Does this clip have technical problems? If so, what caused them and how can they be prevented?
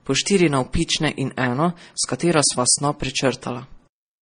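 Yes. Throughout the speech there's nothing above 9.7 kHz, and two kinds of compression artefacts overlap. That's likely transcoding between lossy codecs, maybe a low-bitrate MP3 re-encoded to AAC-LC, with each encoder adding damage. Encode once, from a lossless master.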